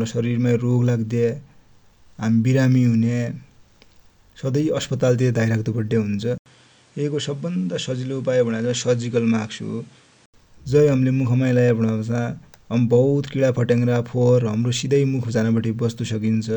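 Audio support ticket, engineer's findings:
Likely an input switched to a poorer device, 6.38 to 10.34 s. The capture path moves to a narrower-band microphone. There is an 80 ms gap at the switch, nothing above 10.4 kHz, speech around 5 dB quieter, and a new noise floor some 35 dB below it.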